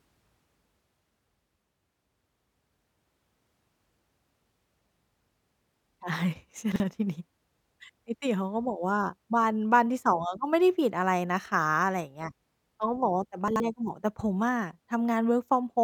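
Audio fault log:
6.72–6.80 s and 13.48–13.60 s, chunks out of order: a 40 ms chunk plays one, then two, chunks late, scrambling the sound briefly, with three hard joins.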